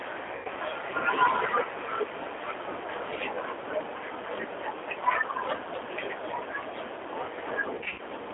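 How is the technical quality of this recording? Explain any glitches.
The recording is narrowband and coded throughout, with two short dropouts where the sound turns buzzy or noisy and fades.

Across the whole clip the speech sounds thin, slightly rough and synthetic, with nothing below about 300 Hz or above 3.5 kHz. That is the G.729 codec, here the G.729A variant at 8 kbit/s. It does not send the waveform. It rebuilds each 10 ms frame from a vocal tract filter, a pitch predictor and a few coded pulses, so the coding damage is plainly audible.

From 0.35 to 0.48 s the sound smears into a buzzy tone or coloured noise that fades. This is VoIP packet loss concealed by the speech codec. About 100 ms of audio never arrived, which fits roughly five 20 ms packets. The decoder filled the gap by repeating its last pitch and filter at falling gain. Because each frame builds on the previous one, the speech stays weak for a moment after packets resume.

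From 7.78 to 8.01 s the same concealment returns in a choppier form. About 140 ms went missing, scattered across roughly 200 ms, and the longest single gap was 40 ms. The result is a stuttering stretch of short fades rather than a single fade.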